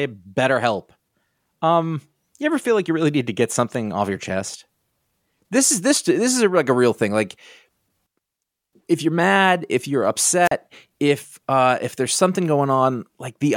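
A wireless microphone squelch dropout occurs from 10.43 to 10.52 s, just after "you're mad if you're" and before "if uh if there's". The radio link from the analogue FM transmitter weakens, so the receiver's squelch cuts its output to protect against noise. A short burst of hiss rises, then the speech falls into near silence for about 41 ms before returning, leaving a quick, clipped gap in the phrase.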